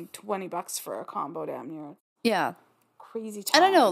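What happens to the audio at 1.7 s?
Nothing goes wrong at 1.7 s: the speech is intact at that moment, with no dropout, click or distortion to be heard.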